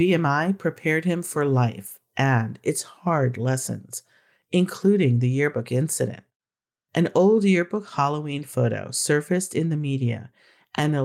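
Nothing technically wrong turns up anywhere in this short stretch of speech, so there's no fault to point to or explain.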